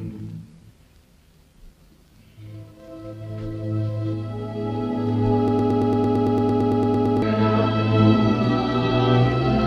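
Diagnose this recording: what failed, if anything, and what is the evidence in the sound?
A broken-record loop runs from 5.48 s to 7.22 s: one fragment of about 113 ms repeats 15 times back to back, each pass identical, before normal sound resumes. This most likely happened at the playback or streaming buffer, where a stalled stage kept resending the last block it held, so the sound due in those 1.7 seconds never arrived. Unlike a dropout, there is no silence, and unlike jitter stutter, the repeats are exact and evenly spaced.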